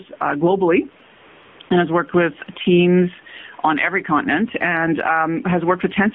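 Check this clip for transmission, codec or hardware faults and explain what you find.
Three faults are audible: gain pumping, AMR narrowband coding and two bursts of AMR comfort noise.

Gain pumping, throughout: the level swings by roughly 15 dB. The gain is pulled down on each loud syllable, likely from gain set too high with a fast limiter clamping every peak, so the speech sounds flattened and squashed.

AMR narrowband mobile codec, throughout: the audio is confined to about 150 Hz to 3.5 kHz, with nothing above. The speech has the buzzy, synthetic edge of a low-rate vocal-tract model, consistent with a 7.4 kbps AMR-NB mode, and the damage is plainly audible.

AMR comfort noise, 1.16 to 1.60 s and 1.62 to 1.70 s: the codec judged those moments silent and stopped sending speech. The receiver filled in smooth synthetic noise that switches in and out, replacing the real room noise, which otherwise sits about 37 dB below the speech.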